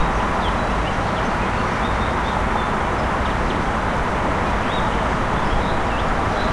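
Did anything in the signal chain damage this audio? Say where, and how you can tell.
No, nothing in this recording of sounds stood out on listening as damage from any stage of the signal chain.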